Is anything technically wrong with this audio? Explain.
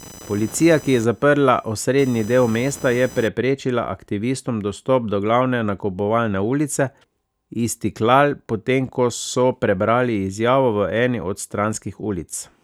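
Yes. From the start to 3.28 s, a buzzing, chirping whine pulses at around 1 kHz, roughly 20 dB below the speech. This is computer activity noise: load changes in the processor or graphics card disturb the ground shared with the audio circuit.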